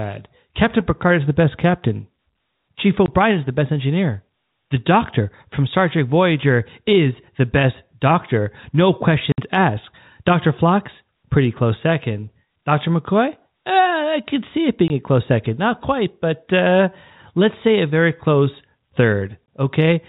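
Packet loss filled with silence hits at 3.06–3.08 s, 9.32–9.38 s, 14.88–14.90 s and 19.47 s. Each gap is a hard-edged dropout, with the 60 ms one suggesting three missing 20 ms packets.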